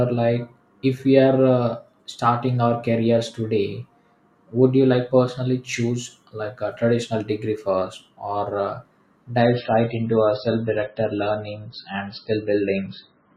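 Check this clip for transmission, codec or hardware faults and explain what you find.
One fault: from 9.41 s to the end at 13.36 s, an adaptive stream at a lower bitrate suddenly cuts everything above 5.6 kHz, gaplessly, with swirly speech artefacts, consistent with a drop from about 128 to 16 kbit/s MP3. A spectrogram shows a flat ceiling there.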